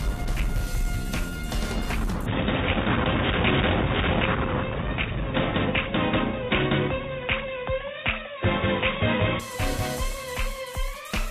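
Input switched to a poorer device from 2.26 s to 9.40 s: the sound abruptly narrows, with nothing above 3.8 kHz, turning dull and boxy, and a faint new background noise appears while the level barely changes. This is likely a switch to a different microphone or headset profile.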